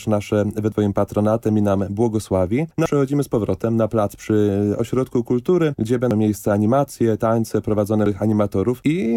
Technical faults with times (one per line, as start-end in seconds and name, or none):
0.72 damaged data in a compressed stream
2.86 damaged data in a compressed stream
6.11 damaged data in a compressed stream
8.06 damaged data in a compressed stream